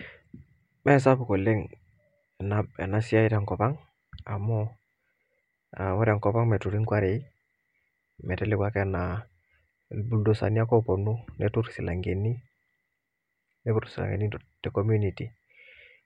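Speech recording with no technical faults to point to. Nothing in the signal chain calls for a time stamp or a cause here.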